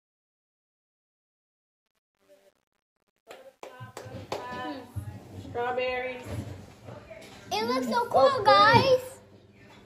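Truncation distortion on a fade spans 0.0 to 5.43 s, worst until 4.29 s. An undithered stage, fitting 10 bits, leaves the quiet audio gritty and stepped.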